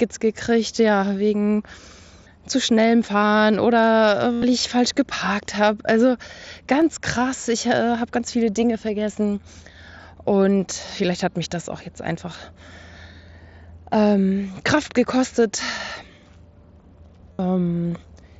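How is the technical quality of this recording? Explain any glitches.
The speech comes through a wideband Bluetooth headset link with light mSBC grain, and there are two kinds of fault: concealed packet loss and CD scratch ticks.

Concealed Bluetooth headset packet loss occurs at 4.34–4.44 s, just before "ich falsch geparkt habe", and at 17.33–17.39 s. Packets from the headset were dropped, and the receiver filled each gap by repeating the best-matching recent stretch of waveform. The first gap is about 98 ms of fill, mostly a single 90 ms run, and it turns into a buzzy, full-level held tone with a slight warble as the real audio resumes. The second gap is 60 ms. What sets this apart from the ticks is the sustained, pitched buzz where they give only brief clicks.

CD scratch ticks occur at 6.09–7.06 s, five ticks between "ich falsch geparkt habe" and "ich äh habe ganz", and at 10.47–11.20 s, four ticks just before "hat mich das auch". 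A disc blemish corrupted more data than error correction could rebuild on each rotation, so the player patched or muted the bad samples. Each tick lasts only about 1 to 1.5 ms at most, and they recur at a steady rotational rhythm. That regular spacing and tiny size distinguish them from the longer, tonal packet-loss fills.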